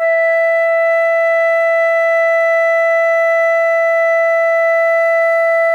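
Nothing in the music stood out as a technical problem on listening.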